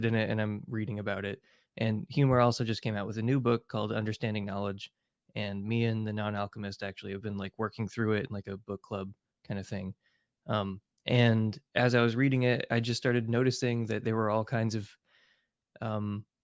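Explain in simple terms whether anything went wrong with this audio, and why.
Nothing went wrong with this speech audio, because no fault can be heard anywhere in it.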